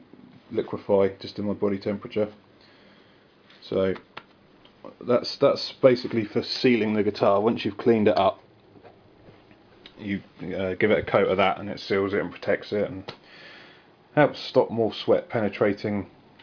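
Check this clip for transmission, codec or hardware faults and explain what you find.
Nothing in the clip points to a fault in how the audio was carried, encoded or captured. There is no event to place in time and no mechanism to explain.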